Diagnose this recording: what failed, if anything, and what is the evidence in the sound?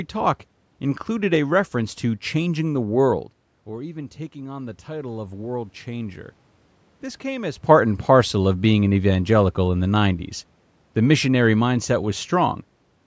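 Automatic gain rising in the call processing. Just after "to changing the world", the input fell by about 14 dB as the talker moved. From 3.68 to 6.26 s the AGC slowly added about 4 dB of gain, so voice and room noise swell together.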